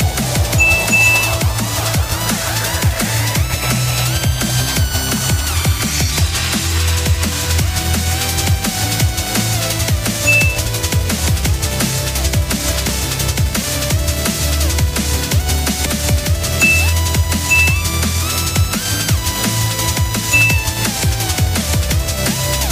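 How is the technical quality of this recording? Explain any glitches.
The recording has three brief glitches from damaged data in a compressed stream. They occur at 10.66 s, 12.89 s and 15.86 s. Each is a short chirp or blip that cuts across the sound. Part of the compressed data was lost or corrupted at these points. The decoder misreads the affected frames and loses sync. It then searches for the next valid frame header before normal decoding resumes.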